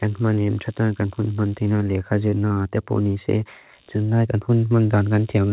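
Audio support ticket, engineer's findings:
Computer activity noise throughout. Buzzy ground-borne pulsing at roughly 70 per second, about 35 dB under the speech. Source: CPU, GPU or mouse load shifting the shared audio ground. Tracks machine activity, not the speech.

Short concealed packet loss at 2.30–2.34 s, 2.48–2.52 s and 2.54–2.58 s. Brief smears and wobbles. About 20 ms lost each time. Receiver extended the previous sound, then crossfaded back. Audio band ends at 4 kHz, fitting G.711-type narrowband.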